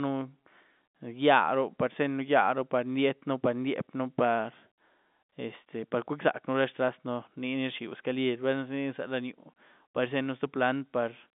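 No faults can be heard.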